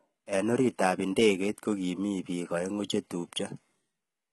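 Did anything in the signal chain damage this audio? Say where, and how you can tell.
Yes, at the codec stage, throughout the speech: the s sounds come out gritty and metallic, with bright treble that doesn't line up harmonically with the lower band. That is likely heavy HE-AAC compression, with upper bands rebuilt from copied lower ones. A plain low-pass would sound dull, not synthetic. The heavy damage fits roughly 16 kbps.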